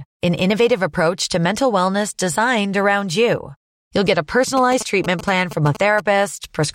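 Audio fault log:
4.57–6.00 s GSM signalling bursts: after "get a", a galloping dit-dit-dit of short 217 Hz buzzes, about 10 dB down, from a nearby 2G phone's rectified radio bursts. The spectrogram shows clustered groups of harmonic comb lines.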